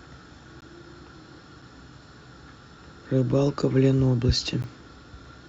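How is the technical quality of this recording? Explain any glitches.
Four brief holes in the speech are the only problem. A gap between stream segments occurs at 0.61, 1.62, 3.62 and 4.62 s. Successive one-second segments don't quite meet in time, so the player pads the 4 to 15 ms gaps with silence. Each sounds like a hard-edged blip of nothing, with no audio missing.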